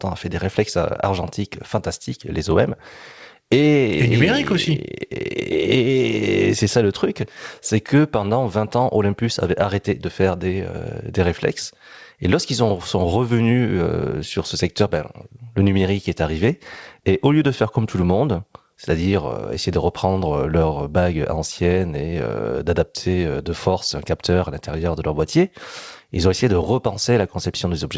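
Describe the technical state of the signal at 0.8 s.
At 0.8 s the speech is intact, carried through the call path with its band ending at 8 kHz and no fault present at that moment.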